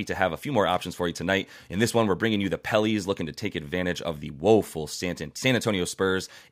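No technical faults turn up anywhere in this speech recording, so there's nothing to flag or track down here.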